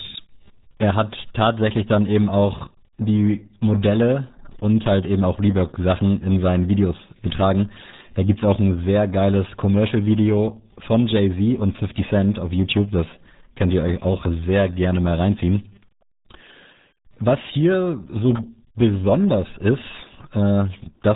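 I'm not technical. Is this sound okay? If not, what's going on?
No. The speech was squeezed through the RealAudio 14.4 codec, an old format built to push audio over dial-up modems by throwing away most of the detail. Here it strips out everything above about 3.8 kHz and damages what remains heavily, from the first second to the last. That's why the voice sounds muffled, as if heard through a wall, with a gargly, bubbling edge.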